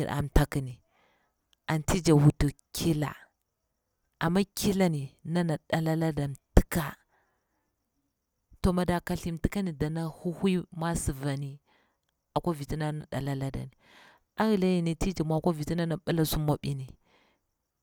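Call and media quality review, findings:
No faults found in this speech recording; the signal path shows no dropouts, clipping, timing errors or level anomalies.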